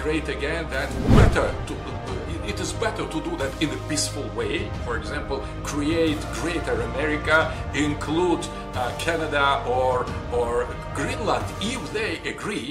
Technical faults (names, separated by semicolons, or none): none